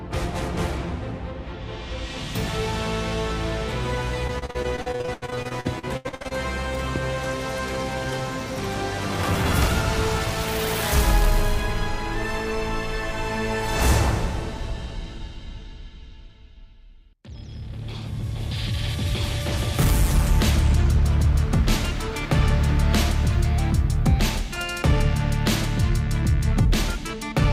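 From 4.27 to 6.32 s the sound turns choppy, with bits missing. This is repeated packet loss: over a couple of dozen dropouts, each up to 79 ms, the lost audio is patched by stretching the previous sound, covering about a third of the stretch.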